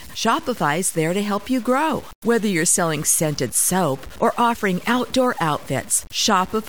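Low bit depth without dither runs through the whole speech clip, and the likely cause is truncation to about 6 bits with no dither added. Because the rounding error tracks the signal instead of being randomised, it comes through as grainy distortion riding on the speech, most exposed in quieter stretches and decays, where low-level detail sputters between steps or drops out. The resulting error sits roughly 25 dB below the signal.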